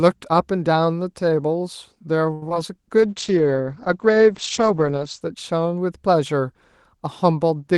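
At 2.33 s the speech stalls for about 84 ms, until 2.43 s. This is a short stall from a late packet. The jitter buffer ran dry, so the receiver held the last sound until the delayed packet arrived and then resumed at the same point. Nothing is lost, but the sound is drawn out unnaturally with a faint buzz or dip, and everything after it runs about 84 ms later.

Two short concealed packet losses follow, at 2.49 to 2.51 s and 2.54 to 2.56 s. Each drops about 10 ms of audio, and the decoder patches it with roughly 12 ms of extrapolated sound before crossfading back into the real signal. Each patch is heard as a brief smear or wobble just after the stall.

From 2.97 s to 5.27 s there is a call bitrate drop. The Opus encoder is pushed from 32 kbps down to 13 kbps and stays at the lowest rate for about 2.1 s. The coded bandwidth narrows from 12 kHz to 8 kHz, so the speech loses its upper sibilance and air and sounds duller, watery and coarse. 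The brightness returns as the rate climbs back.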